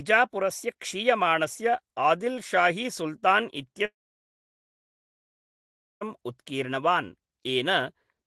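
At 3.85 s the speech breaks off into a long network dropout lasting until 6.03 s, about 2.2 s of lost audio, likely because packets stopped arriving. The receiver briefly stretches the last sound into a fading buzz, then leaves roughly two seconds of near-silence before speech resumes with that section simply gone. On a waveform this shows as a short decaying tail and then a flat line. A spectrogram shows a smeared, fading band followed by an empty gap, with content up to about 12 kHz on either side from the Opus call path.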